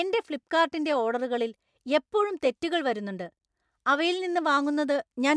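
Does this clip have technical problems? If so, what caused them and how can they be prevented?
No, there are no technical problems to report in this speech recording. Since nothing has gone wrong, there is nothing here that needs preventing.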